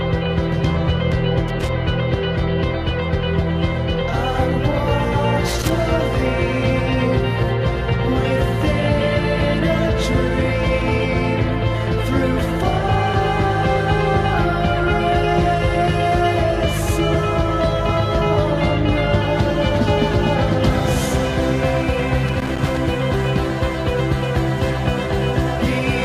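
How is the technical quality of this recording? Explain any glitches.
The recording has loose connector crackle in three short bursts: 1.48 to 1.69 s, 5.47 to 5.71 s, and 22.28 to 22.77 s. Each sounds like irregular scratchy crackling, caused by a worn or dirty contact rapidly making and breaking, chopping the signal.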